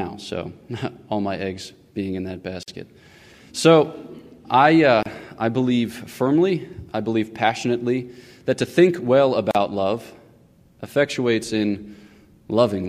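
Silences of 47, 28 and 38 ms open at 2.63, 5.03 and 9.51 s. They are gaps at joins of encoded pieces, from untrimmed padding.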